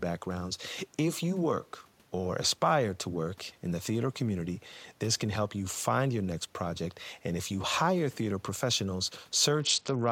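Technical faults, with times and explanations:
9.60 to 10.12 s, Bluetooth SBC bit pool drop: the link congested and the encoder slashed its bit allocation, consistent with a bit pool falling from about 31 to 8, near 66 kbps, so upper sub-bands vanish, treble dulls, and gritty quantisation noise rises, while the room noise sits about 36 dB below the speech.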